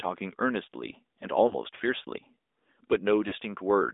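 The whole clip carries the sound of the AMR narrowband mobile codec. The speech sits in a band from about 250 Hz to 3.7 kHz, with nothing above. The codec rebuilds the voice from a vocal tract model excited by a few pulses per subframe. Codec damage is plainly audible as a buzzy, synthetic edge. The coarseness points to a mid-range rate, around 10 kbps.

From 1.48 to 1.54 s comes the first burst of lost AMR speech frames. About 20 ms of coded speech failed to arrive intact. The decoder repeated its last good pitch and vocal tract settings at lower gain. The result is a brief dip or warble. From 3.28 to 3.34 s a longer gap, about 40 ms, does the same. The sound smears and sags, then returns a little rough.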